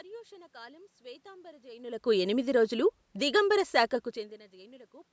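A speech recording with no audible technical faults.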